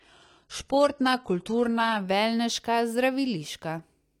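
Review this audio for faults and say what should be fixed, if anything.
Adaptive stream starting at a low bitrate, 0.0 to 2.0 s. Treble is thin, with nothing above 11.8 kHz, which fits HE-AAC near 16 kbit/s. Quality then jumps without a gap, fitting AAC-LC near 96 kbit/s. To prevent it, start playback on a higher rung or buffer briefly before playing.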